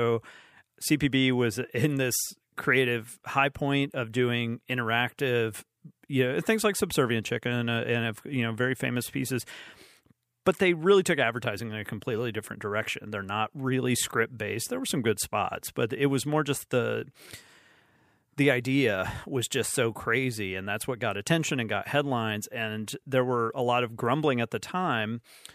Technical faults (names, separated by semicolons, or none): none